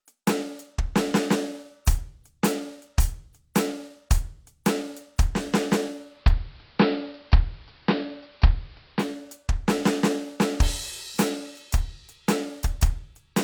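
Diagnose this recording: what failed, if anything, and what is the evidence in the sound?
The fault is digital radio blending to analogue at the receiver's reception stage. From 5.87 s to 9.33 s the music cross-fades over about 0.47 s into the AM broadcast and later returns. On a spectrogram the upper treble thins out for that span and a faint noise floor of hiss appears, roughly 35 dB below the music. The waveform shows a level step of about 4 dB at each blend.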